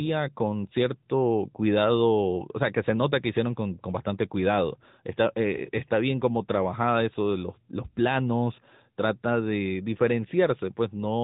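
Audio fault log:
Throughout, AMR narrowband mobile codec: the speech has that unmistakable phone-call sound, with nothing getting through above about 3.8 kHz, so sibilants go dull and the top end is simply gone. The codec rebuilds the voice from a vocal-tract model excited by a handful of pulses per short subframe, and the damage is plainly audible as a buzzy, synthetic edge. The degree of it fits a higher AMR-NB mode of around 10.2 kbps.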